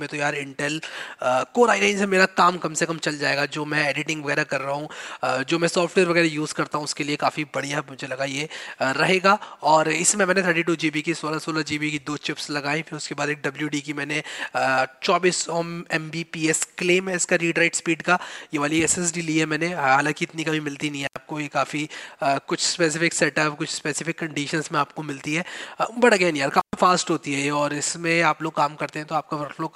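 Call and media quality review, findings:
Intermittent contact, probably a loose cable or plug in the analogue chain: the connection opens briefly, twice. Audio drops out at 21.04 to 21.17 s (about 85 ms open) and 26.60 to 26.73 s (about 118 ms open), with crackle at each edge and hiss during the gap.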